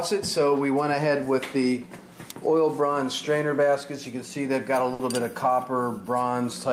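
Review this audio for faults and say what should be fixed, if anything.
Burst of packet loss, 4.93 to 5.02 s: the last sound is held and faded for 60 ms, then 60 ms is skipped, showing smeared, decaying spectrogram bands before an abrupt jump. To prevent it, add forward error correction or redundant packets and give the jitter buffer more headroom.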